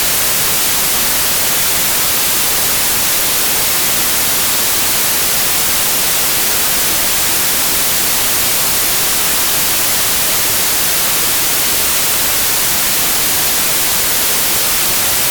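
From start to finish the samples are built from the wrong bytes, so fast-changing low bits dominate each value, producing loud, harsh broadband noise.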